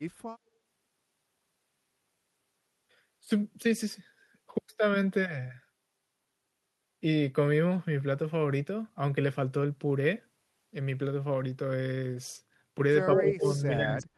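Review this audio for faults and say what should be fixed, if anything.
From 13.05 s right to the end at 14.17 s, the speech gets pushed down hard, dropping by something like 40 dB at its deepest. That's most likely speech suppressed in double talk: the echo canceller couldn't separate the talker from the far side, so it ducked both. Better double-talk detection would fix it.

At 13.15 to 13.34 s there's a delayed copy of the voice, about 155 ms behind and roughly as loud as the speech itself. That sounds like echo leak, likely from a loudspeaker whose echo canceller let some pickup through. Tuning the canceller's delay and tail length would stop it.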